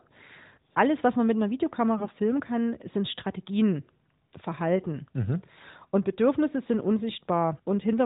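From 1.98 to 2.10 s the speech turns hoarse and gargly, roughly holding pitch and level: AMR bit errors, with about one in twenty weakly protected bits flipped.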